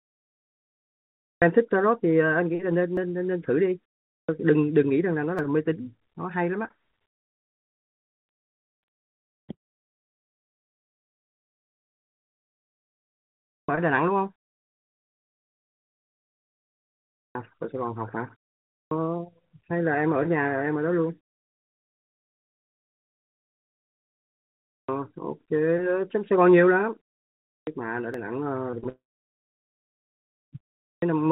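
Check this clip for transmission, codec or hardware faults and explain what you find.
Four kinds of fault are present: clipped starts after pauses, dropped buffers, long network dropouts and a burst of repeated packet loss. All of them sit on top of a narrowband G.711 mu-law call path with nothing above 4 kHz.

Clipped start after a pause occurs eight times: at 1.26, 4.12, 13.52, 17.18, 18.74, 24.73, 27.52 and 30.87 s. In each case the output device has gone idle during the preceding silence and has to wake and resynchronise before it passes audio again. The first 150 to 170 ms of sound after each pause is lost, so speech bursts in abruptly, already under way, without its opening sounds. This happens after short gaps of 0.3 s as well as long ones of 4 s.

Dropped buffers occur at 2.97, 5.39 and 28.14 s. The likely cause is an overrun, where the capture side failed to read its samples before the hardware wrote over them. 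Roughly 20 ms vanishes each time, which fits a buffer of about that length. The audio on either side is joined directly, with no silence between, so each one is heard as a sudden skip forward in the sound.

Long network dropouts occur from 9.53 to 9.82 s and from 28.89 to 30.01 s. In both, the likely cause is that no packets reached the receiver for a sustained stretch. About 0.28 s is lost in the first and about 1.1 s in the second. The receiver briefly extends the last sound as a fading buzz, then leaves silence. The sound resumes later, with the missing portion simply gone.

Repeated packet loss (robotic sound) runs from 28.71 to 28.87 s, just before the second dropout. Packets went missing in four separate gaps, none longer than about 21 ms, and together they total around 60 ms. Each gap is patched by extending the previous sound, and close to 40% of this span is made up of these patches. 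The result is a brief choppy texture with small pieces of sound missing.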